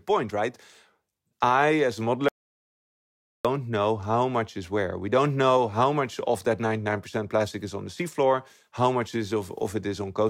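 Audio dropout to silence, 2.29–3.45 s: after "I as a" the sound goes dead, no room tone, until "know how much is"; likely a lost input.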